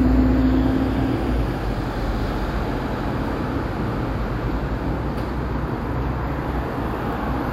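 No technical faults can be heard in this recording of sounds.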